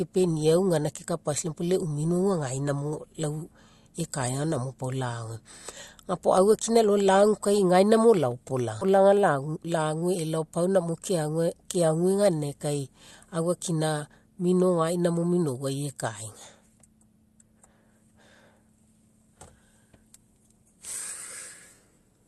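Speech over a call path, with the audio band stopping around 12 kHz, which fits Opus at about 40 kbps. There's a skip ahead at 8.81 to 8.83 s. Roughly a second of audio got dropped, and playback jumps straight across with no fill. Then from 9.41 to 10.02 s there's a jitter buffer speed-up. The buffer trims tiny pitch-period slices, around 70 ms in total, so the talking runs about 109% fast at unchanged pitch.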